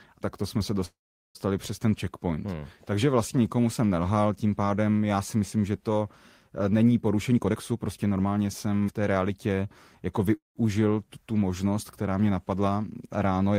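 At 0.85 s, right after "tak to jsme se", the speech stops for about half a second. The last sound carries on as a short fading buzz, then falls silent for 0.4 s. It resumes at 1.38 s with "přes ten checkpoint", and nothing is lost. This call audio freeze was likely caused by delayed packets emptying the jitter buffer.

From 7.32 s to 10.30 s there is a jitter buffer speed-up. The speech plays at about 115% speed with unchanged pitch and sounds hurried. The receiver was shedding surplus buffered audio, trimming around half a second in small pitch-period pieces.

At 10.37 s a second call audio freeze lasts 0.22 s. A brief fading continuation gives way to 150 ms of silence, and the speech then picks up where it stopped. A late packet likely drained the buffer again.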